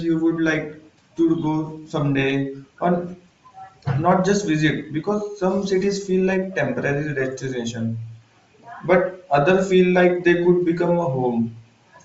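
From start to finish the speech carries a breathy, grainy edge, with the upper frequencies sounding hissy and smeared rather than crisp, and the damage is plainly audible throughout. The likely cause is Bluetooth LC3 compression: the LE Audio transform codec, short of bits, discards much of the upper spectrum and fills the gaps with shaped noise. The texture fits a low setting of around 32 kbps with 7.5 ms frames.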